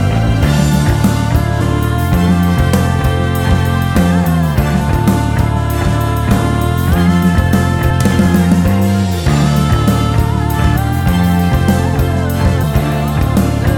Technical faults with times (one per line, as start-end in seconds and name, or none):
1.60 damaged data in a compressed stream
4.80 damaged data in a compressed stream
7.89 damaged data in a compressed stream
10.75 damaged data in a compressed stream
12.63 damaged data in a compressed stream